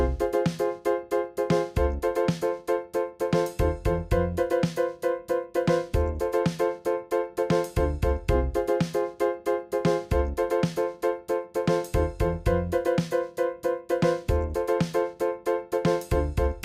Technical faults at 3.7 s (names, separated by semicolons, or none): none